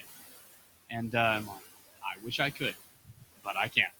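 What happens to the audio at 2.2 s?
At 2.2 s the speech is cut by the noise suppressor. The fault runs from 1.96 to 2.39 s. Within that span the suppressor mistakes parts of the speech for background noise. It turns them down along with the noise, by about 20 dB at the deepest point. Roughly 150 ms of sound is affected. Those parts sound swallowed and faint.

The same moment also carries noise suppressor artifacts, which run through the whole clip. The suppressor pulls the steady room noise down by about 16 dB, frame by frame. The room noise sits about 13 dB below the speech. It sinks in the gaps and comes back up under the speech.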